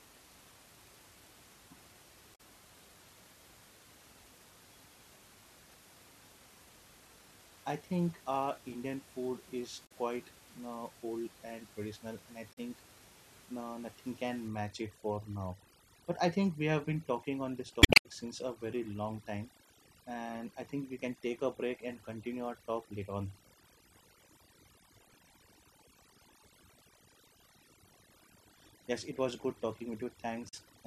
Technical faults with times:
2.34-2.40 damaged data in a compressed stream
9.85-9.92 damaged data in a compressed stream
12.52-12.58 damaged data in a compressed stream
14.48-30.86 overdone noise removal
17.80-18.06 damaged data in a compressed stream
30.48-30.54 damaged data in a compressed stream

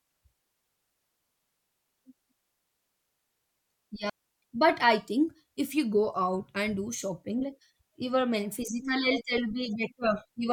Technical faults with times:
4.10-4.42 digital wireless dropout

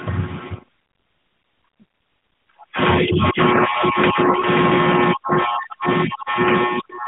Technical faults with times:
4.40-4.45 lost AMR speech frames

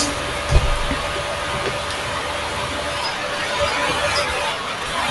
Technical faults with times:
none

